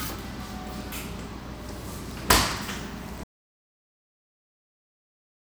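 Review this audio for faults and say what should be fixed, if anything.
At 3.24 s the sound cuts off abruptly and stays dead to the end of the clip, an audio dropout to silence lasting about 2.3 s. The input was likely lost through a disconnected device, failed link or accidental mute while the recorder kept writing silence. Unlike a fade-out or a natural pause, there is no tail and no room tone, just a hard edge into silence. Monitor inputs during capture and secure connections and mute controls.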